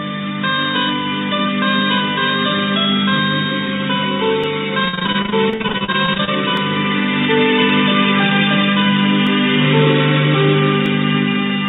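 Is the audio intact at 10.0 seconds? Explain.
Yes, the audio is intact at 10.0 seconds. Apart from the call path's usual narrowband character, with nothing above about 4 kHz, nothing breaks or distorts the sound there.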